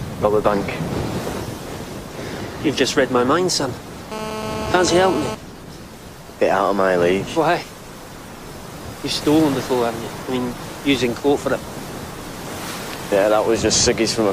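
From 4.12 to 5.35 s a hard, raspy buzz at 217 Hz, thick with harmonics, runs steadily about 6 dB below the signal. This is GSM phone buzz: a nearby phone on a call transmits in 217 Hz bursts, which the audio circuitry rectifies into sound.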